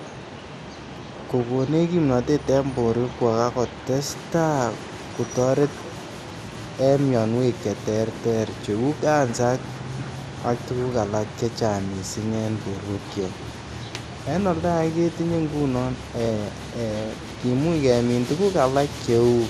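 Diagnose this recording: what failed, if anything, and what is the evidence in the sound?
The codec stage failed. MP2 compression damage is plainly audible across the whole speech clip. Nothing is present above 13.6 kHz, so the sound is dull. Starved upper sub-bands are switched off and the rest coarsely quantised, leaving a gurgling graininess. A low bitrate is the likely cause.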